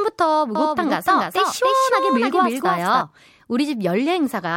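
From 0.55 s to 3.01 s the speech carries a doubled audio track: a second copy trails the first by around a third of a second, roughly 5 dB quieter, full-band and dry, with no room colour. It switches on and off abruptly. This is likely a second capture through a slower path or two misaligned copies in an edit. A waveform shows each syllable repeated at a fixed offset, and a spectrogram shows every pattern ghosted to its right.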